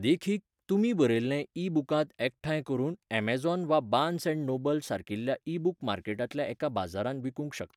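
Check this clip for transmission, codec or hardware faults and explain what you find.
Nothing in the speech points to a transmission, codec or hardware problem; no fault found.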